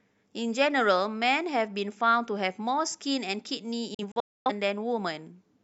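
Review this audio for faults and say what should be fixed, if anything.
A digital broadcast dropout hits the speech from 3.94 to 4.51 s. The receiver lost frames and muted until good ones returned. About 341 ms goes silent in several holes, the longest 256 ms, each cut in with a 3 ms fade. Stronger reception or more robust error protection would prevent it.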